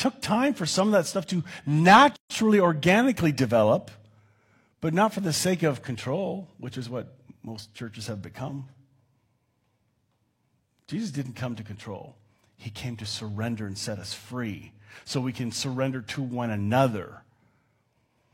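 A speech clip with a single gap at a join of encoded pieces, from 2.16 to 2.30 s, just before "organically develop". The sound drops out for about 139 ms with edges smeared by the codec, then resumes where it stopped. This points to two separately encoded segments butted together without trimming: the first segment's padded final frame and the second's encoder start-up delay both remain, leaving a short silence in continuous speech.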